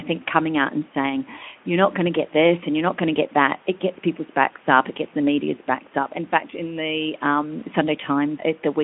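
No technical fault can be heard in the speech, which comes through a Speex link at 15 kbps with its band confined to roughly 200 Hz to 3.4 kHz and only the light coding texture that setting brings.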